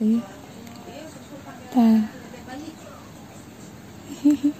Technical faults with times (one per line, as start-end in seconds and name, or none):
none